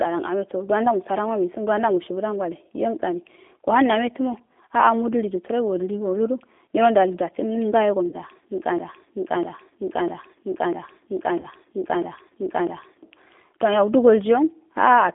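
G.729 codec coding runs through the whole clip, and the damage is plainly audible. At 8 kbit/s the speech is rebuilt from a vocal tract filter, a pitch predictor and a handful of pulses per short frame, so the waveform is modelled rather than copied. The result sounds rough and slightly synthetic. The line band spans roughly 250 Hz to 3.5 kHz, which removes the low body and the upper presence of the voice.

VoIP packet loss concealed by the speech codec appears at 8.09 to 8.15 s, where about 30 ms of audio, consistent with a single lost packet, goes missing. The decoder fills the hole by extending its last pitch and filter state at falling gain, which smears the speech into a brief buzzy tone or coloured noise that fades. Because each frame depends on the one before, the voice stays weak or distorted for a moment after the audio resumes.

A broken-record loop runs from 8.78 to 13.03 s. 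A fragment about 0.65 s long plays seven times back to back, repeating exactly each time. The likely cause is a stalled player or stream that kept resending the last piece it held, and whatever should have played during those four seconds is lost.

Inside that loop, at 11.40 to 11.47 s, a second concealed packet loss of about 30 ms adds another short, decaying smear.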